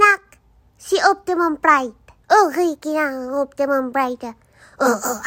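No technical faults can be heard anywhere in the audio. Nothing in the recording or playback chain draws attention to itself at any point.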